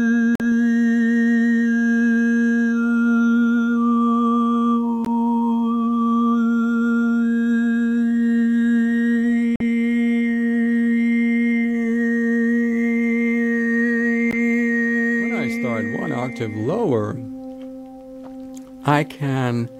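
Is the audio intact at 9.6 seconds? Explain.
No, there's a Bluetooth dropout from 9.56 to 9.61 s: a sudden silent hole, likely from late wireless packets being dropped, and then the sound picks up as if it had played on.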